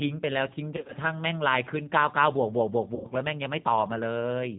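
Throughout, the audio passes through G.729 coding, which the rough, synthetic timbre and the absence of anything above 4 kHz point to at 8 kbit/s, leaving plainly audible damage. From 0.77 to 0.93 s, VoIP packet loss concealed by the speech codec drops about 90 ms in short gaps of up to 20 ms. The decoder extrapolates its last pitch and filter into a fading smear. At 2.95 to 3.08 s, another 90 ms is concealed the same way.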